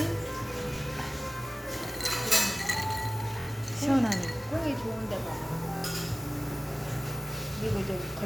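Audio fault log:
0.76 to 5.84 s, Bluetooth stutter: The stutters fall at 0.76 to 0.78 s, 3.40 to 3.47 s and 5.77 to 5.84 s. The receiver replays its last short slice of audio until data returns. The first gap, about 23 ms, fits one lost packet. The later two, about 70 ms each, sound like a brief machine-gun buzz. The sound then resumes further on.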